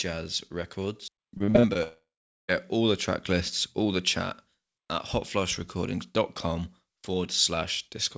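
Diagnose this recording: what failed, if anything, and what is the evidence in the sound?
From 1.38 to 1.77 s the speech turns choppy, with six short holes, the longest about 43 ms, and nearly half of that stretch filled in by the receiver. This is repeated packet loss (robotic sound) at the network stage: packets went missing or arrived too late, and the jitter buffer's concealment stretched the last decoded sound over each gap, producing the robotic texture instead of clean audio.

From 1.83 to 2.50 s a buzz or hiss left over from the last sound fades out, then about 0.42 s of silence follows until the audio resumes at "all the track lists", with the intervening speech gone. This points to a long network dropout, likely a stall in the connection. Concealment covered only the first part of the gap, then gave way to silence. The G.722 call path cuts off everything above 8 kHz on both sides of the gap.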